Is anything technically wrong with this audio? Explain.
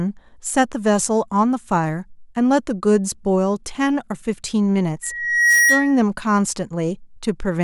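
Yes. Loudspeaker feedback squeal runs from 5.03 to 5.99 s: the microphone picks up its own loudspeaker, and at 1.9 kHz the loop gain tops one, so that tone grows over about half a second into a squeal about 5 dB louder than the speech.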